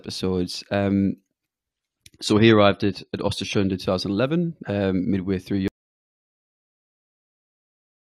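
From 1.71 to 3.71 s the adaptive stream drops to a lower bitrate, around 32 kbit/s. Everything above 13.9 kHz abruptly vanishes and the speech turns thin. At 5.68 s the input was likely lost, causing an audio dropout to silence: the speech cuts off into total silence, with no room tone, until the end.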